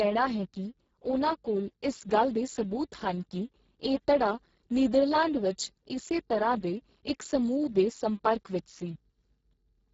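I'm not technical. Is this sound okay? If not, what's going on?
No. The speech was sent through the Speex codec, an older voice-chat compressor, set to squeeze it into a very small amount of data. With so little to work with, it keeps only a rough sketch of the voice. From start to finish the speech sounds noisy, hoarse and heavily damaged, and nothing above about 7.7 kHz survives, so the crisp top edge of sounds like s and t is gone.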